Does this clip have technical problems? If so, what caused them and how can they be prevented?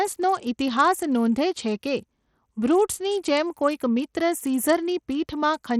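Yes: throughout, the speech has dull, flickering treble with gritty grain, likely Bluetooth SBC compression starved of bits, which fits a low bitrate near 80 kbps. Use wired capture or a higher-quality Bluetooth codec.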